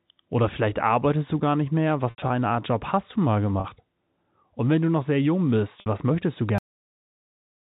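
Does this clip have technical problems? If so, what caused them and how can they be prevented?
Yes. At 2.1 to 2.30 s after "du gar nicht mehr", at 3.6 to 3.64 s after "hast du mal", and at 5.8 to 5.86 s before "was möchtest du", the sound briefly holds a buzzy, repeated tone. This is packet loss with pitch repetition: the receiver loops the last pitch period to cover missing packets. Adding jitter buffering and forward error correction on the network path would prevent it.

At 6.58 s the audio stops dead mid-sound into silence with no decay. This is a cut-off end, where the final buffers were never written or played. Flushing and draining all buffers before closing the stream would prevent it.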